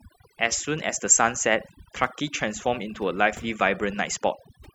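Across the whole recording the background drops and breaks up into twinkling specks. This is overdone noise removal: the noise reduction was set too strong, cutting individual frequency bands close to the noise estimate and taking quieter parts of the voice with them.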